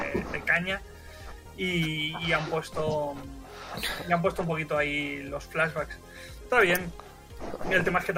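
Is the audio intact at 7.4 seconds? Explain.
No. Word clock ticks run from 0.57 to 7.66 s: an unlocked receiver clock, roughly 30 ppm off, slips one sample about every 0.7 s, giving sharp ticks at a steady rate, unlike random clicks.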